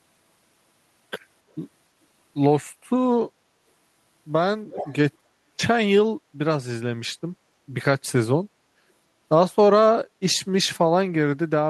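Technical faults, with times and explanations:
4.72–4.95 s, echo leak: a second copy of the speech returns 285 ms behind the original, about 10 dB quieter. It lasts under a quarter second. The likely cause is a loudspeaker at the other end whose echo canceller let some microphone pickup through.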